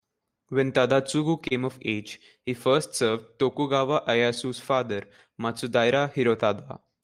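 Throughout the speech, the sender's audio clock runs slow, roughly 2 percent behind the receiver's. This is clock drift between sender and receiver. Because audio arrives more slowly than it is played out, the jitter buffer keeps draining, and the receiver has to stretch or repeat short pieces to keep going. The result is small timing hiccups, scattered unevenly across the whole clip, as brief stumbles in the rhythm.

From 0.25 to 1.53 s, just before "of age he", a few packets arrive late or go missing one at a time. These are scattered short gaps, about four of them. The receiver fills each hole by continuing the last sound, covering around 50 ms in total, with the longest single patch near 30 ms. Nothing drops out completely. Instead there are brief ticks and momentary smears in otherwise clear speech.

After "of age he", from 2.71 to 6.84 s, the same scattered short gaps come back, roughly ten of them. 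Concealment fills about 100 ms across this span, and no single patch is longer than about 20 ms. Each lost piece is again bridged by extending the preceding sound, so the audio never goes silent. The effect is a sprinkling of brief ticks and small smeared hiccups through this longer stretch.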